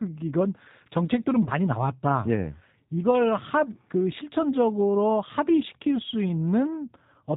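Speech throughout carries G.729 codec damage: a plainly rough, slightly synthetic quality consistent with an 8 kbit/s frame-based rebuild from a filter and sparse pulses. On a spectrogram, energy stops sharply at 4 kHz, and harmonics look smeared and grainy. From 1.44 to 1.50 s, VoIP packet loss concealed by the speech codec stretches the preceding sound into a fading buzzy tone or coloured noise, fitting three 10 ms frames. The level stays weak briefly afterward.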